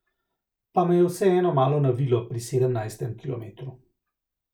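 No technical faults can be heard anywhere in the recording.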